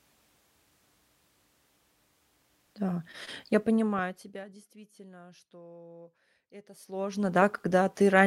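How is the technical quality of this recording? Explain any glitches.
Two stretches of zipper noise show up in the speech. From 3.60 to 4.67 s the level drops by roughly 25 dB, then from 6.71 to 7.36 s it climbs back by about the same. Each move goes in 1 dB jumps, around forty a second, with no smoothing, so every jump clicks and you get a gritty ticking over the voice.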